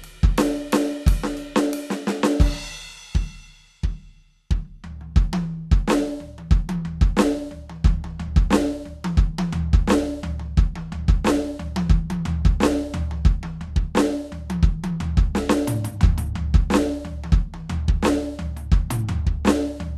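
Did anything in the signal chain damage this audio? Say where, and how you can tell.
No, nothing in this music points to damage anywhere along the chain, so there's no stage to single out here.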